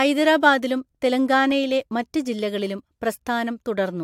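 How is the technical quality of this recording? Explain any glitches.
Listening through the recording, nothing technical stood out as a glitch or problem.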